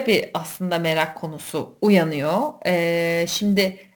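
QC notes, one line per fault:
Throughout: sample clock jitter. The converter clock wanders, so each sample lands a little early or late at random, on the order of 10 microseconds. The error follows the steepness of the waveform. A hiss and roughness ride on the speech, sitting roughly 20 dB below it. They swell on loud syllables and bright sibilants and drop away in the pauses, because silence has no slope to mis-time.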